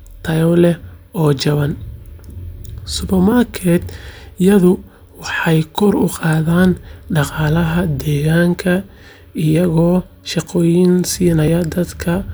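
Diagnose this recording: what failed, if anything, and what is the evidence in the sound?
Likely dropped buffers (overrun) in the driver: overwritten samples cause forward skips at 3.32, 5.42 and 11.48 s, the last longest, around 20 ms.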